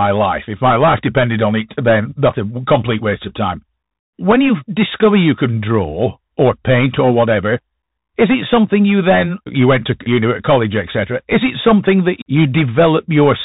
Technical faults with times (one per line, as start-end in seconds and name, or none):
0.00-13.44 Bluetooth CVSD headset codec